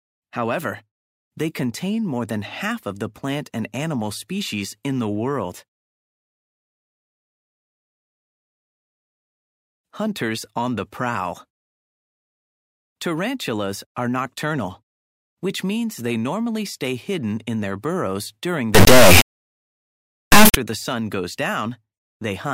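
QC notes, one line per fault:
18.75–20.55 s, integer read as float: the sound turns into an extremely loud, harsh buzzing square wave that slams between the clipping limit and silence. This fits 32-bit integer samples being read as 32-bit float, producing values either near zero or far beyond full scale.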